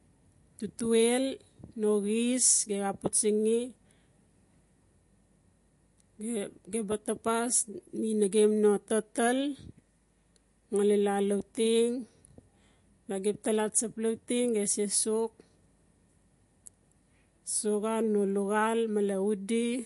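From start to finish the speech has a watery, swirling texture, with a dull top end: nothing is heard above about 11.3 kHz. This is likely MP3 compression at a low bitrate, consistent with roughly 48 kbps. Short of bits, the encoder cuts off the treble at a fixed point and drops the weaker frequency lines, which then flicker in and out from one frame to the next. That flicker is what makes the speech sound watery and swirly.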